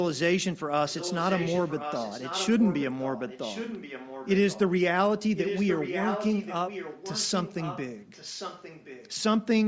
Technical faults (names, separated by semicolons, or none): echo leak